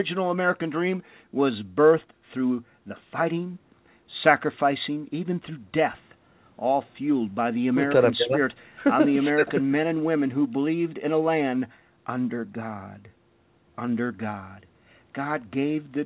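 No technical faults can be heard in the speech, which has the narrow telephone band of a G.711 mu-law call path, with nothing above 4 kHz, and the trimmed lowest bass of call microphone processing.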